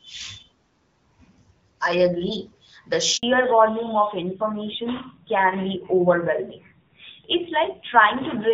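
At 3.17 s the speech breaks off in a handover gap lasting about 60 ms, until 3.23 s. During the network switch no speech frames arrive, so the sound fades within a few tens of milliseconds and then goes fully silent. It differs from a dropout or packet-loss concealment because there is no smeared or repeated fragment filling the hole. The audio simply stops, and the speech spoken during that moment is gone.

From 3.23 s to the end of the clip there is a fallback to narrowband. Before the gap, the speech has the fuller, clearer top end of HD Voice, with only light coding damage, which fits AMR-WB at 12.65 kbit/s. After it, nothing above 4 kHz remains. The speech turns duller and rougher, which points to AMR-NB at around 7.4 kbit/s. What sets this apart from a plain low-pass filter is that it starts abruptly at the handover and comes with coarser coding texture, not just lost brightness.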